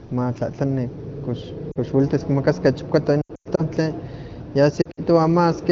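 Lost AMR speech frames hit three times: a 40 ms dip at 1.71 s just before "kox welitis", then 200 ms scattered across 3.21 to 3.63 s, and 100 ms across 4.82 to 5.00 s. Each time the decoder stretched old settings with falling gain, giving warbly, smeared gaps.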